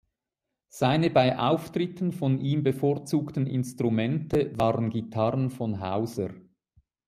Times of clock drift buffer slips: none

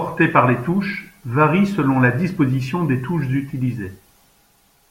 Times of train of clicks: none

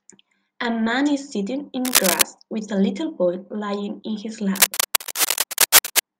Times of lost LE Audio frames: none

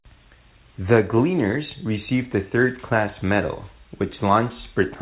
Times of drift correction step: none

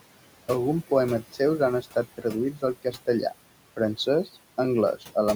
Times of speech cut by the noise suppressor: 2.83-3.08

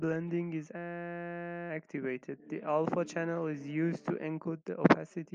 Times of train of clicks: none

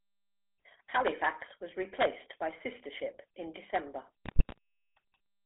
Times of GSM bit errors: 4.25-4.58

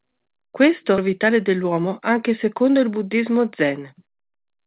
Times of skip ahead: 0.98-1.05

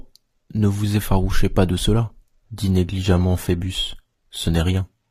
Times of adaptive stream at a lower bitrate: 2.44-5.11

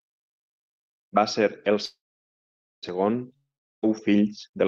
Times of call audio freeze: 1.85-2.85

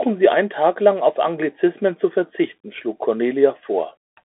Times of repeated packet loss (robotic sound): none

